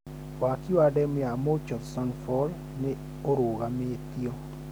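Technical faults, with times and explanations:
No technical faults can be heard in the speech recording, and the signal stays steady and continuous throughout.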